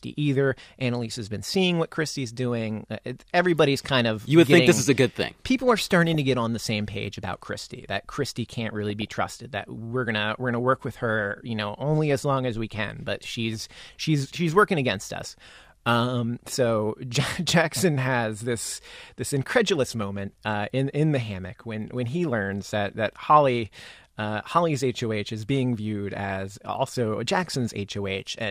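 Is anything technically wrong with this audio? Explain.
Yes, the speech has DAB burbling: brief bursts of burbling at 6.10–6.15 s (just before "to get on the"), 8.90–9.15 s, 19.99–20.17 s (after "has this this incredulous", before "uh in in the"), 23.73 s, and 26.30–26.47 s (after "is being viewed"). Weak reception lets bit errors slip past error correction into the MP2 data, so wrong samples put short noise blips in single sub-bands and wrong scale factors make sub-bands jump in level for up to a frame. Unlike steady low-bitrate codec smearing, it comes in isolated bursts.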